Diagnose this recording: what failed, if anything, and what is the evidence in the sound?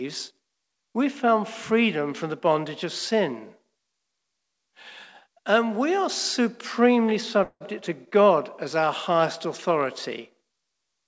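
At 7.44 to 7.63 s, right after "we are supremely", there is a call audio freeze at the network and jitter-buffer stage. Packets likely stalled and the buffer ran dry, so the receiver stretched the last sound into a fading buzz for about 166 ms, ending in about 50 ms of silence. The audio then resumes with nothing lost but 166 ms late. On a spectrogram, capped at 8 kHz by G.722, smeared horizontal streaks decay into a blank strip. The waveform shows a tapering tail, then a flat gap.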